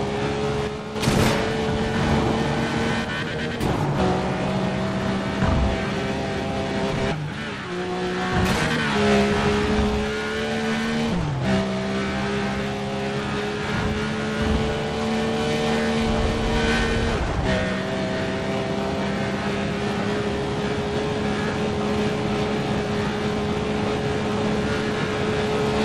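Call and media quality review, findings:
One channel drops out, 0.67–0.96 s. Level falls abruptly by about 6 dB for roughly 0.29 s, then snaps back. Likely cause: one stereo leg lost briefly upstream of the mono downmix, so shared content halves in amplitude and any content unique to that leg vanishes. Waveform: clean step down in envelope with square edges at both ends, no fade. Spectrogram: uniform darkening across all frequencies for that span, with any bands carried only by the lost channel missing entirely.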